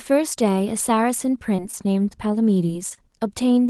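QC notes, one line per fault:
QC notes, one line per fault:
1.56–1.60 s, 1.71–1.88 s and 2.68–2.72 s, short concealed packet loss: each time about 20 ms of the call never got to the decoder, so the receiver papered over the gap by extending the preceding sound and easing back into the real audio. You hear a quick smear or little wobble rather than a dropout. The middle one runs a touch long, and the last one gets only about 12 ms of fill.
2.95–2.99 s, short stall from a late packet: this time nothing is actually lost. A packet showed up late, the jitter buffer ran dry, and the receiver held the current sound for about 26 ms until it arrived, then picked up where it left off. It comes across as a slightly stretched moment with a slight buzz or dip, and everything after it sits that 26 ms later.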